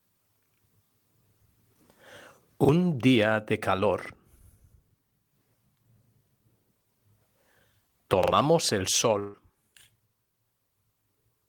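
Audio failed to arrive in time three times, so the device replayed its last buffer of about 43 ms, which fits a 2048-sample buffer. Repeated buffers at 2.65–2.69 s and 4.05–4.10 s each play one extra time, skipping about 40 ms. At 8.24–8.32 s the buffer repeats twice, skipping about 100 ms. Each is a short stutter with hard joins.

At 9.19–9.35 s, a burst of packet loss leaves 140 ms undelivered. The receiver stretches the last sound and fades it across the gap, then resumes further on, with that stretch of audio gone.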